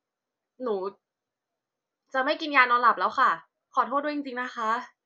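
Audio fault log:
No technical faults can be heard anywhere in this speech recording. There is nothing to list against any time in the log.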